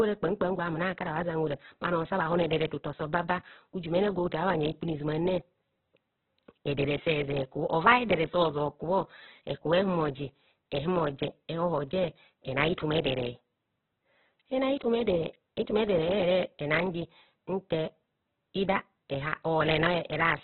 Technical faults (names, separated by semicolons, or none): Opus compression